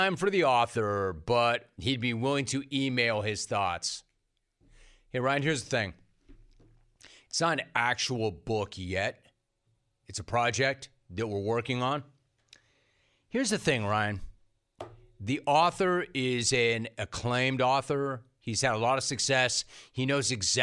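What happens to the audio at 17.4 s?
Nothing goes wrong at 17.4 s; the speech there plays through intact, with no dropout, click or distortion.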